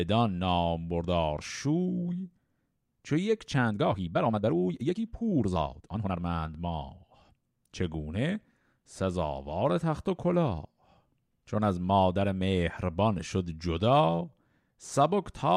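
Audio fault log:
3.49–6.17 s, time-stretched section: software likely squeezed this stretch to fit a shorter slot, playing it about 1.7 times faster and dropping short pieces to hold the pitch, so the speech abruptly turns rushed while its pitch stays the same.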